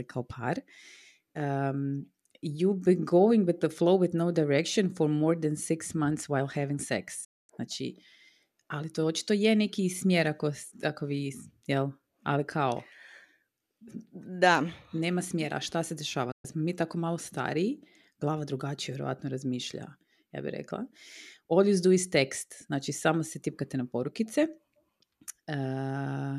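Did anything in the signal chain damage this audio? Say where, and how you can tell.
Yes. The speech drops into silence twice, each time with a quick fade of about 8 ms: from 7.24 to 7.50 s, and from 16.31 to 16.45 s, just before "smo mi tako malo". The speech doesn't pause and resume; it picks up later, so whatever was said in the gaps is gone. That is a digital broadcast dropout at the reception stage. The receiver lost signal or rejected corrupt frames and muted until clean frames arrived. The 240 ms and 120 ms holes fit runs of roughly ten and five lost frames.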